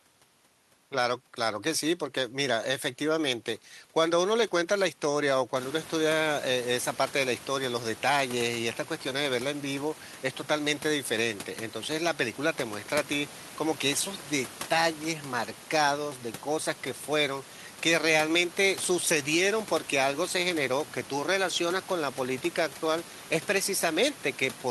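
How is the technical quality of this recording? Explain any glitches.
No glitches to explain here; the only thing you'll notice is the room's background noise stepping up by about 17 dB a few seconds in, which is just the space the mic was in and stays well under the speech.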